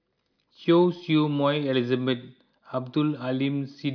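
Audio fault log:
No audible faults detected.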